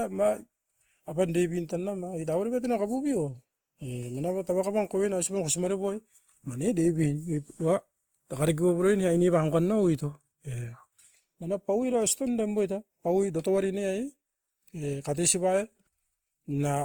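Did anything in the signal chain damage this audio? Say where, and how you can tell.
Yes. Across the whole clip the speech has a grainy, rough texture, with harmonic detail smeared into a hiss-like fizz rather than thinned out or swirling, while the top end still reaches about 20.2 kHz. That points to the codec stage, likely Opus compression in its CELT music mode at a low rate, around 24 kbps. CELT preserves each band's energy but, short of bits, refills band detail with folded or noise content, which roughens the speech.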